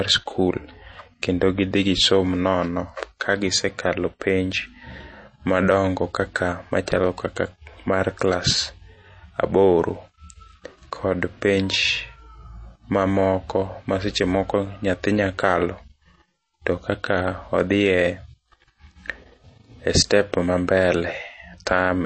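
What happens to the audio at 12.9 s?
At 12.9 s, as throughout the clip, the encoder is starved of bits, likely MP3 compression at a rate fitting about 32 kbps. It removes everything above 8.3 kHz and drops weak frequency lines frame to frame, so the speech sounds dull and plainly watery.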